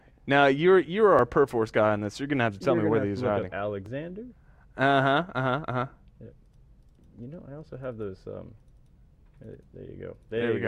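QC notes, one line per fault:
1.19–9.22 s, clock drift buffer slips: likely two devices on mismatched clocks, off by around 1000 ppm, so the shared buffer periodically drops or repeats a block of roughly 150 samples. Each slip breaks the waveform, giving about four regular clicks, one every 2.67 s.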